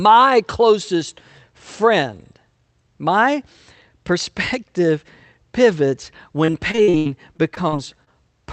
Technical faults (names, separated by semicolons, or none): repeated packet loss (robotic sound)